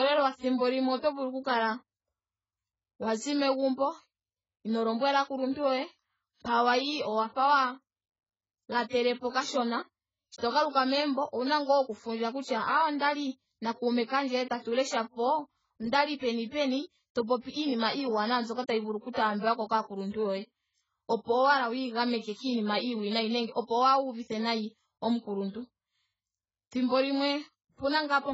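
AAC compression runs throughout, likely from AAC-LC at a very low bitrate, which fits something near 12 kbps. Nothing survives above 7.7 kHz, leaving the speech dull, and coarse quantisation causes heavy smearing, with a warbling, fizzy texture on sustained sounds and sibilants.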